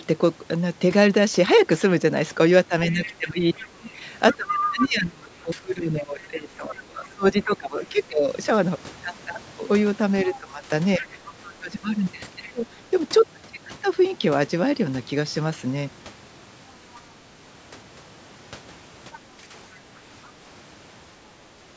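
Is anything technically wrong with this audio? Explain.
Yes. Other side's voice leaking through at 2.9–4.88 s, 10.25–12.51 s, 19.13–19.18 s and 20.25–20.3 s is likely loudspeaker echo the canceller failed to remove. A second voice surfaces, strong at first (about 5 dB below the talker), then weaker, ending as faint, brief scraps.

Speech suppressed in double talk occurs at 2.91–8.29 s, 10.25–12.67 s and 19.17–19.55 s. With both sides talking, the echo canceller likely couldn't separate the talker from echo and turned everything down. The talker's voice dips by up to about 20 dB, then about 15 dB, then about 10 dB, thinning and dropping out in pieces.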